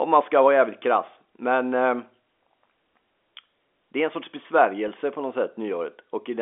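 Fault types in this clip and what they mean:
Packet loss with pitch repetition: at 4.88 s about 10 ms of speech goes missing, which points to a single dropped packet, and the receiver fills the hole by replaying the last pitch period rather than leaving silence. The gap is too short for the fade-out to take hold, so it sounds like a tiny held, slightly buzzy blip. A waveform shows identical repeated cycles; a spectrogram shows the harmonics briefly frozen into a flat stripe.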